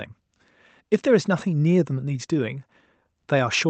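No technical faults are audible.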